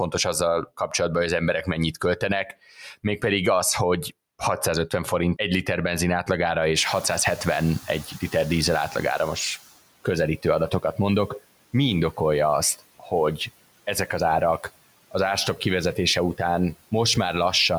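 Between 2.47 and 3.23 s, right after "hogy az emberek mennyit" and before "az hogy", there is speech cut by the noise suppressor. The suppressor mistakes low-level parts of the speech for noise and turns them down by as much as about 13 dB, across roughly 400 ms in total. Those parts sound swallowed or faint, but they do not go silent. The background dips along with them, so the level falls as a whole. A dropout would instead break the signal outright.

From 6.76 to 9.63 s, just after "egy liter benzin átlagára", the noise suppressor is catching up. At about 7 s the room noise jumps by about 22 dB. The suppressor's noise estimate lags behind, so the new noise comes through with little reduction at first. Over 2.87 s the reduction builds to about 11 dB and the noise sinks under the speech. This is a single slow settling after one step in the noise, not a repeated rise and fall like pumping.

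At 13.0–13.12 s, after "indokolja azt", the suppressor cuts speech again, this time by about 9 dB over roughly 100 ms. That part sounds swallowed or faint.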